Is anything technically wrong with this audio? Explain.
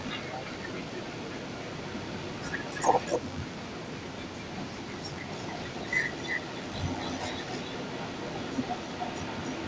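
Yes, there are two faults. The first is an echo leak running through the whole clip. A loudspeaker on the far end was likely not fully cancelled, so its microphone sent the voice back. A copy trails the speech by about 258 ms, only a few decibels below it, giving a doubled sound.

The second is speech suppressed in double talk, from 0.31 to 0.44 s. The echo canceller apparently could not separate the near talker from the returning echo, so it turned both down. The voice briefly dips by around 10 dB.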